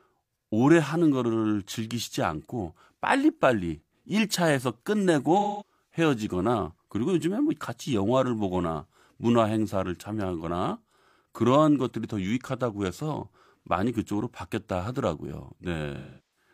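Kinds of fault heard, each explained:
AAC frame loss with concealment: At 5.38 to 5.71 s and again at 15.96 to 16.49 s, the speech gives way to a smeared, noisy stretch instead of clean audio. Blocks of the AAC stream went missing, about 213 ms the first time and 384 ms the second, which fits roughly five and nine lost frames. The decoder covered each gap by rebuilding sound from the last good spectrum with scrambled signs and tapering energy.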